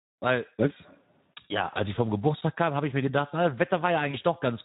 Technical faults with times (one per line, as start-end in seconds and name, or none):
0.00-4.65 Speex codec
1.73-1.79 VoIP packet loss concealed by the speech codec
2.41 block of digital silence
4.11-4.17 VoIP packet loss concealed by the speech codec